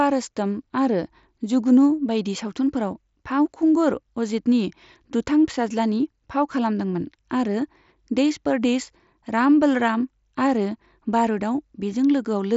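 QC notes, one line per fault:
No faults found; speech runs over the Bluetooth mSBC headset link at about 61 kbps, with nothing above about 7.7 kHz and light codec texture on louder passages.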